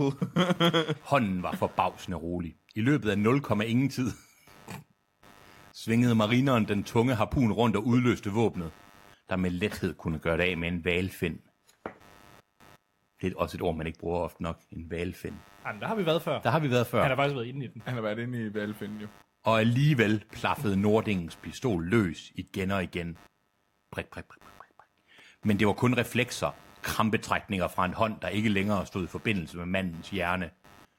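Computer activity noise runs throughout: a buzzing pulse near 100 Hz, roughly 30 dB below the speech, appearing as evenly spaced vertical striations on a spectrogram.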